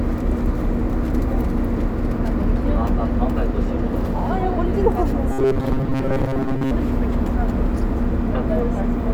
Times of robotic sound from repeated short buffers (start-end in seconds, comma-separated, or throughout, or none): 5.32-6.72